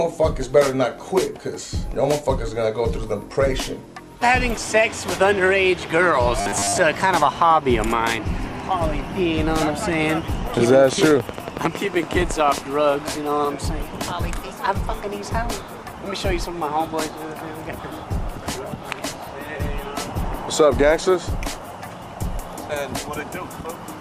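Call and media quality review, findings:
Robotic sound from repeated short buffers, 6.41 to 6.78 s. Audio likely arriving too seldom; playback loops the last chunk, repeating most of it. Rigid metallic buzz at 100 Hz, which fits a 10 ms buffer.

Train of clicks, 10.93 to 12.59 s. Likely interference or a faulty connection or power supply injecting pulses. About twenty similar clicks at a regular 10.9 per second, peaking roughly 15 dB above the sound.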